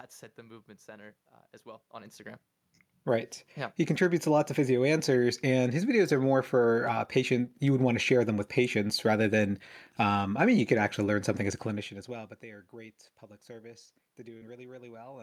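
Speech showing short concealed packet loss at 8.87–8.91 s and 14.37–14.43 s, where about 20 ms and 40 ms went missing and the decoder extended the preceding sound, leaving brief smears.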